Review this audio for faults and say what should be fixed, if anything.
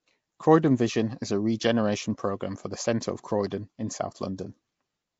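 Throughout, the speech carries a rough, hissy halo and a smeared, underwater blur, with nothing above 7.7 kHz. This is likely Nellymoser compression: the Flash-era codec spends a fixed small bit budget on short blocks, filling starved bands with noise, which fits roughly 32 kbps. Record or export with a modern codec such as Opus or AAC at an adequate bitrate, or keep the uncompressed source.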